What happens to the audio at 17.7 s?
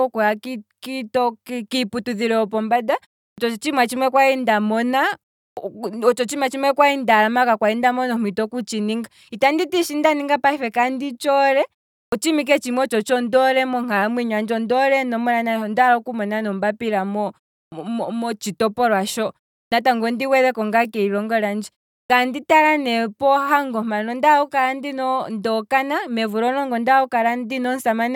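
At 17.66 to 17.72 s there is a clipped start after a pause. Following a silence of about 0.35 s, the output path has dropped into a low-power or unlocked state and needs time to come back up, so the first 60 ms of the speech that resumes is never reproduced. The word therefore begins abruptly out of silence, missing its onset, and jumps in partway through its first sound instead of building up naturally.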